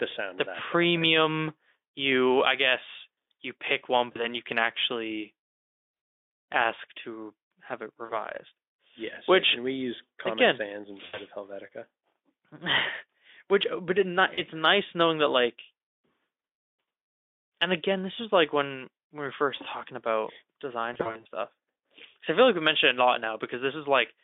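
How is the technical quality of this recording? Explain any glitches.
The speech recording has six short dropouts from VoIP packet loss concealed by the speech codec, heard over a narrow telephone-style band of roughly 250 Hz to 3.6 kHz from the Speex codec.

The dropouts occur at 4.11–4.28 s, 5.93–6.09 s, 8.05–8.12 s, 11.05–11.18 s, 14.33–14.46 s and 20.93–21.26 s. The decoder fills each gap by repeating its last pitch and spectral shape while lowering the level. This turns the speech into a brief buzzy, fading smear that stays weak just afterwards. The longest single gap is 160 ms, at 5.93 s. The gap at 20.93 s is a cluster of scattered losses across about 320 ms.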